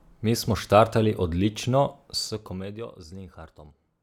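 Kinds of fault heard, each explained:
No faults detected in the speech.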